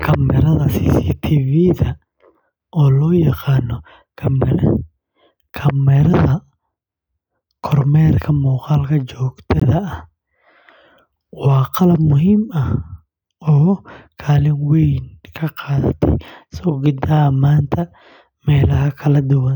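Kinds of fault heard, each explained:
Block of digital silence: At 9.6 s the speech drops to silence for 18.6 ms and resumes with no fade, leaving a brief hole. The waveform shows a flat line, and the spectrogram shows an empty vertical strip.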